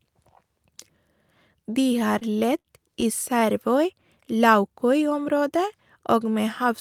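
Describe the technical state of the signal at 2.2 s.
At 2.2 s the speech drags and stutters, with seven short hitches between 1.99 and 3.05 s, the longest about 57 ms. These are repeated stalls (stutter): packets arrived late, the jitter buffer kept running dry, and the receiver stretched the last sound until it could resume, so nothing is lost.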